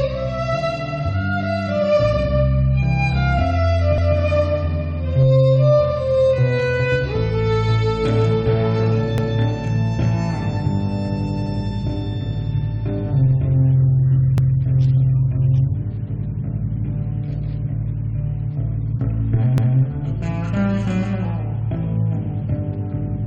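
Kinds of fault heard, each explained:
Overlapping chunks: The audio was handled in blocks of about 5 s, and each block begins 200 ms before the previous one ends. That 200 ms slice plays twice at every join. It sounds like a regular stutter near 4.0, 9.2, 14.4 and 19.6 s.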